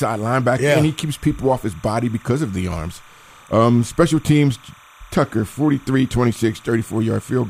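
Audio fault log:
throughout, timecode bleed: a steady chirping warble sits behind the speech, well below it at roughly 30 dB down, flipping between tones near 1 kHz and 2 kHz. Linear timecode running at 29.97 frames per second has leaked in from a neighbouring track or cable, its square-wave code switching between those two pitches an octave apart.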